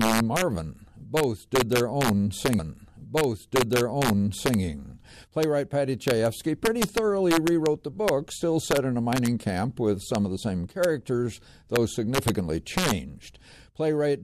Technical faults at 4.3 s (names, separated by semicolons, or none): integer overflow; stream segment repeated